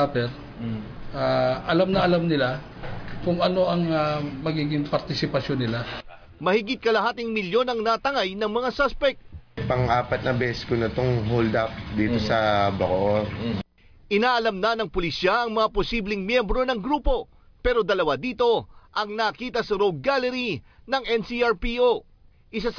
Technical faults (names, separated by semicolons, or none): none